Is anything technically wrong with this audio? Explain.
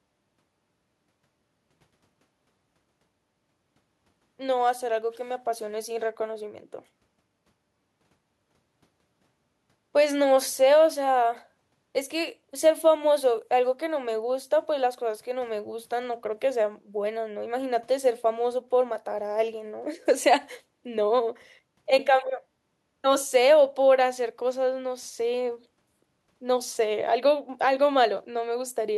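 No, nothing technically wrong stood out on listening to this speech recording.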